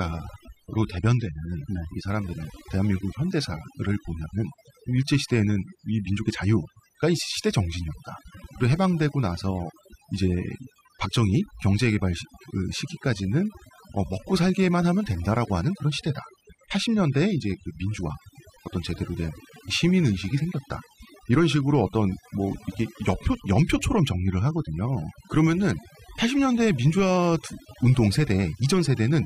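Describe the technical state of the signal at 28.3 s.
At 28.3 s you're hearing overdone noise removal, same as across the whole clip. The noise reducer is clamping hard on any band that sits near its noise estimate, so the background drops and breaks up into little twinkling specks.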